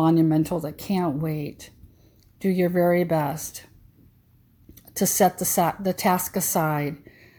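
No technical faults are audible.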